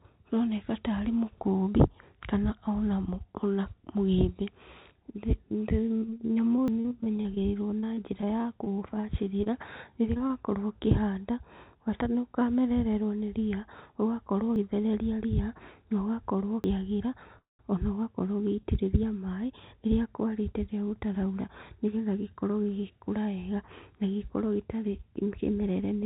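From 6.0 to 10.31 s the speech breaks up with repeated packet loss (robotic sound). Packets went missing in quick succession, about thirty short holes, none longer than about 37 ms, each patched by stretching the preceding sound. The result is choppy speech with pieces gone.

Inside that stretch, at 6.68 s, there is a forward jump of about 70 ms, likely a dropped buffer (overrun) where samples were overwritten before being read. The same abrupt skip without any silence recurs at 14.56 s (about 40 ms) and 16.64 s (about 100 ms).

From 17.39 to 17.61 s comes a call audio freeze, likely caused by the jitter buffer running dry while packets were delayed. The last sound is held as a brief fading buzz, then about 170 ms of silence, before speech resumes where it stopped. The band is limited to 4 kHz, consistent with G.711 mu-law.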